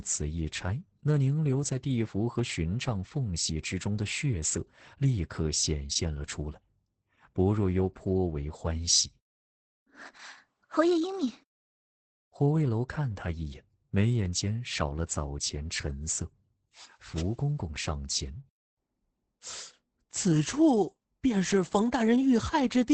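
Speech under heavy Opus voice compression throughout: nothing above 8.8 kHz, and coarse SILK-coded excitation leaves it muffled, hoarse and slightly robotic, which fits roughly 10 kbps.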